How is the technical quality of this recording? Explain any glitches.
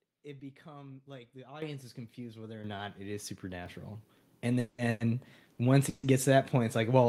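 The recording has two kinds of glitch: two sudden jumps in level and three short freezes where the sound stalls and then carries on.

Microphone volume stepped up: at 1.62 s the whole signal, voice and background together, becomes abruptly louder by about 10 dB, and at 2.64 s it jumps again by about 7 dB, right after "is confused whether or" and before "not it is". Everything rises at once because the call software judged the microphone too quiet and raised the device's input volume in a single step, not gradually.

Call audio freeze: from 4.59 to 4.80 s, 4.90 to 5.02 s (just before "once it gets to"), and 5.89 to 6.05 s (between "once it" and "it gets to that"), the last sound is drawn out into a fading buzz or hiss for about 190, 100 and 140 ms. Nothing is lost. The audio resumes exactly where it stopped, just later. The likely cause is packets delayed in transit, leaving the receiver's jitter buffer empty so it filled the wait with a continuation of the previous sound.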